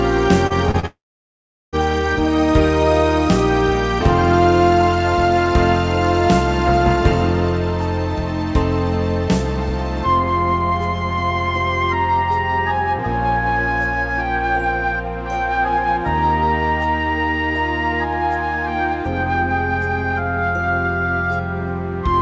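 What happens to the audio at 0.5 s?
A brief smear or wobble runs from 0.47 to 0.53 s, where a short sound may drop out. This is short concealed packet loss: about 30 ms never arrived in time, so the receiver extended the preceding sound to bridge the gap, then blended back into the real audio.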